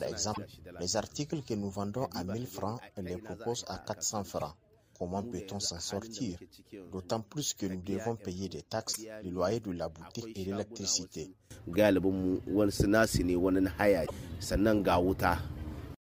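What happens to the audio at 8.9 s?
Damaged data in a compressed stream hits the audio from 8.89 to 8.97 s, a disturbance of about 80 ms. At that point the encoded bytes are corrupt, so the decoder cannot make sense of the frames there, loses its place in the stream and has to hunt for the next valid frame header before normal playback resumes. While it is out of step, the output turns into a chirp, squawk, click or short hole.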